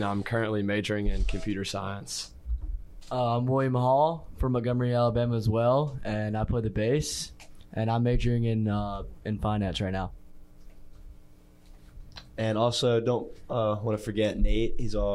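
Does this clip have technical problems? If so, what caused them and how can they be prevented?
No, nothing technical gets in the way here, so there's no problem to track down and nothing that needs preventing.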